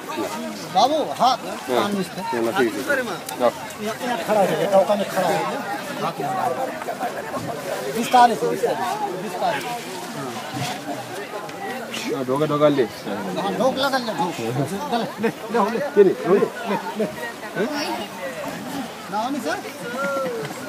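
No technical faults can be heard anywhere in this recording.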